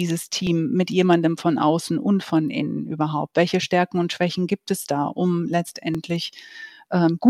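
From 0.47 s to 5.95 s, about four brief clicks punctuate the speech, spaced 1.83 s apart. These are likely clock drift buffer slips. Two clocks disagree by roughly 700 ppm, so a buffer overflows or starves, dropping or repeating a small block of samples each time.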